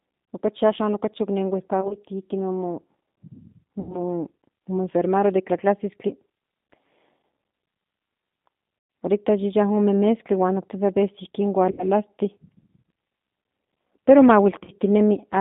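The whole clip runs through a G.729 codec, most likely the G.729A variant at 8 kbit/s, and it's plainly audible. The line is squeezed to roughly 150 Hz to 3.7 kHz, so there's no air on top, and the speech has that slightly rough, synthetic edge you get when the decoder rebuilds everything from a vocal tract filter, a pitch predictor and a handful of pulses per frame rather than the actual waveform.

On top of that there's VoIP packet loss concealed by the speech codec, at five spots. Around 1.81 to 1.97 s it's scattered, short gaps of about 10 ms each adding up to about 40 ms over a 100 ms stretch. Then 3.80 to 3.97 s (about 90 ms), 8.79 to 8.90 s (about 110 ms), 11.71 to 11.86 s (about 70 ms) and 14.64 to 14.70 s (about 40 ms). In each, the decoder keeps repeating its last pitch and filter with falling gain, so the speech smears into a buzzy tone or coloured noise that fades. Because each frame leans on the previous one, it stays weak or distorted for tens of milliseconds or more just after.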